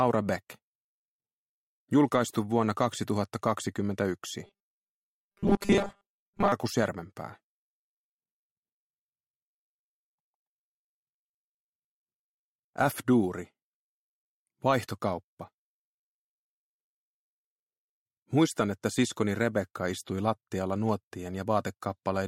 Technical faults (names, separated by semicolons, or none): robotic sound from repeated short buffers